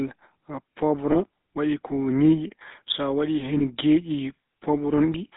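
A speech recording passed through the GSM full-rate codec, with a buzzy, gravelly roughness and nothing above 4 kHz, unlike plain band-limiting, which stays smooth; this fits 13 kbps GSM. Lost GSM frames at 1.12 s and 3.58 s, each about 20 ms, hold the sound as a brief metallic ring rather than dropping to silence the way a plain dropout would.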